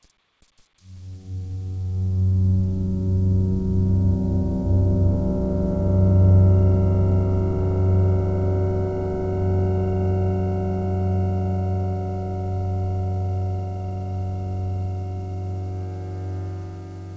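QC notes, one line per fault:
No faults heard in these sounds.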